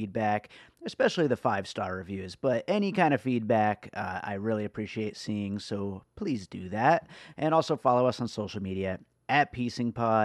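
Nothing stood out on listening to this recording.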